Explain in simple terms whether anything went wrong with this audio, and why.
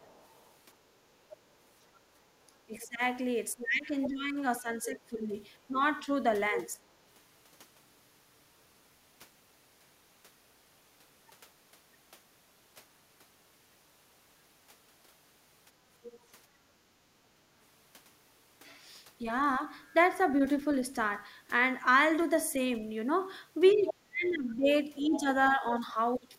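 Other side's voice leaking through, at 0 to 2.9, 4.0 to 6.6, 16.0 to 16.2 and 23.7 to 25.2 seconds: a second voice, likely loudspeaker sound the echo canceller missed.

Speech suppressed in double talk, at 2.7 to 6.8 and 23.7 to 26.4 seconds: the talker's voice dips and cuts out, most deeply at the end, likely because both sides spoke at once.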